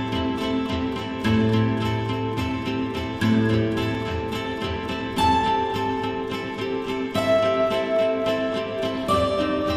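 A single block of digital silence interrupts the audio at 3.95 s. About 1.8 ms of samples drop out and return with no fade, so the gap is heard as a brief tick, likely from an output buffer not filled in time.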